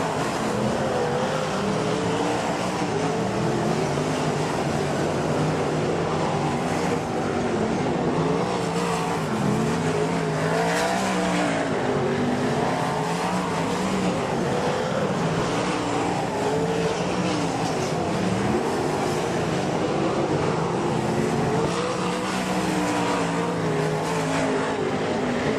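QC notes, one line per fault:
15.39 s, 16.93 s and 24.39 s: compressed frames skipped. At each point the audio jumps forward by whole 20 ms frames, roughly one, two and three frames, or about 20, 40 and 70 ms of material lost. No silence is inserted, unlike a dropout.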